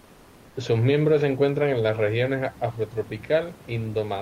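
From the start to 0.55 s, the background is replaced by comfort noise: a steady, featureless hiss about 3 dB quieter than the room noise heard later. This is likely discontinuous transmission, where the sender paused and the receiver synthesised filler noise.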